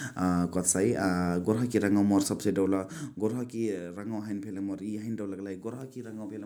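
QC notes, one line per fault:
2.37–3.81 s, zipper noise: level falls about 10 dB in audible 2 dB jumps, roughly four a second, each clicking, unlike a smooth fader move.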